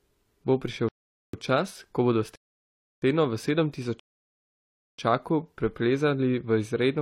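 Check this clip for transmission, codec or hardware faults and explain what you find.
Three rebuffering stalls interrupt the speech. The first runs from 0.89 to 1.34 s, ending just before "čas ko bodo". The second runs from 2.36 to 3.02 s, right after "prišel čas ko bodo". The third runs from 4.00 to 4.98 s. They last about 0.45, 0.67 and 0.99 s.

Each time, playback drained its downloaded audio and waited, giving clean silence. The speech then picks up at the exact syllable where it halted. Unlike a packet-loss dropout, nothing is skipped. The gaps only add time.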